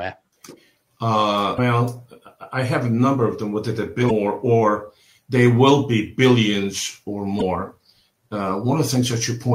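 Three brief bursts of damaged data in a compressed stream occur at 1.55–1.59 s, 4.07–4.11 s and 7.38–7.42 s. Corrupted bytes make the decoder misread frames and lose sync until it finds the next frame header, producing a short disruption each time.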